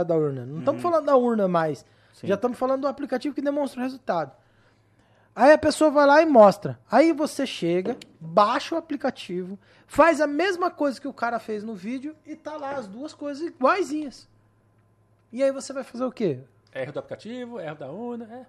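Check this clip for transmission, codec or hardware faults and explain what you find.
Nothing in the speech points to a transmission, codec or hardware problem.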